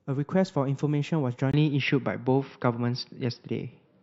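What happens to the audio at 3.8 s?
At 3.8 s the speech is still in the dull, boxy state that began at 1.51 s and lasts to the end of the clip. This is likely an input switched to a poorer device. The new path passes nothing above 5.7 kHz, the level shifts by a few dB, and a fresh noise floor sits roughly 50 dB down. A plain bandwidth drop wouldn't do that. The 20 ms silence at 1.51 s marks the changeover.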